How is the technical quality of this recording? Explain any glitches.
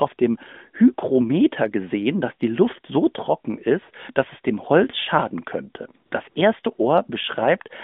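The recording comes through an AMR narrowband mobile codec, with light coding damage and a line band of about 150 Hz to 3.6 kHz, consistent with 12.2 kbps. It contains two brief AMR comfort noise glitches.

At 6.06 to 6.12 s and 6.30 to 6.36 s, the phone stopped sending speech frames for 60 ms each. The receiver substituted smooth synthetic noise, so the real background briefly switches to a flat hiss.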